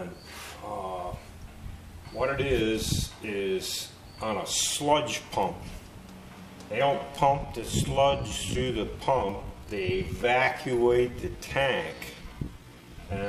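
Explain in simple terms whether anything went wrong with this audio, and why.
From 6.81 s to the end, the audio suddenly drags at about 0.68 times its earlier pace while the pitch stays put. That points to a time-stretched section, likely software lengthening the audio by repeating short pieces. Simply playing it back slower would also lower the pitch.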